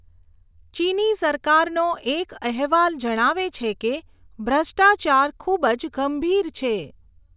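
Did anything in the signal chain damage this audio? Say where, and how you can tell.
No, nothing along the chain seems to have harmed this speech recording, and there's nothing to point to at any stage.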